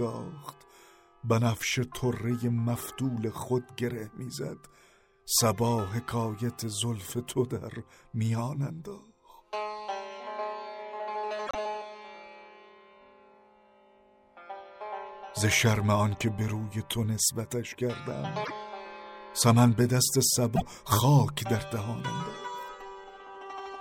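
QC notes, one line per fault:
11.46–11.55 s, 18.43–18.52 s and 20.55–20.62 s, broken MP3 bit reservoir: the audio skips forward and the next 70 to 100 ms, roughly three frames of 26.1 ms, come out garbled. The likely cause is frames that look back for borrowed reservoir data and decode another frame's bytes. On a spectrogram each shows as a narrow vertical band breaking the surrounding texture; on the waveform, an abrupt discontinuity.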